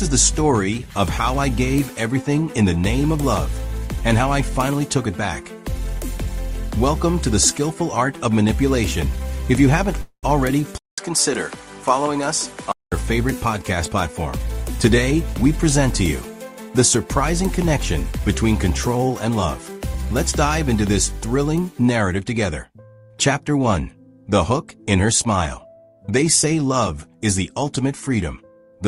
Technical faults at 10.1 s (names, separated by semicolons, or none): call audio freeze